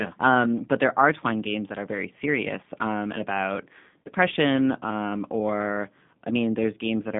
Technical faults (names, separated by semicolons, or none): G.729 codec; VoIP packet loss concealed by the speech codec